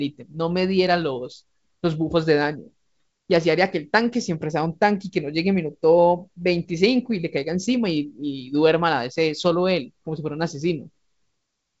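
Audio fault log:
Nothing stood out on listening to this speech, which is carried over G.722 wideband telephone coding with its content reaching up to about 7.7 kHz.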